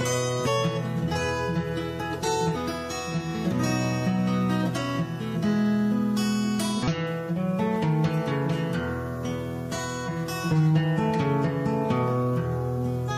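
Five short chirps or blips, each about 50 to 60 ms long, break the audio at 0.42–0.48 s, 2.51–2.57 s, 6.83–6.88 s, 10.03–10.09 s and 13.05–13.11 s. This is damaged data in a compressed stream. Corrupted bytes reach the decoder, which misreads those frames, loses sync and searches for the next valid frame header.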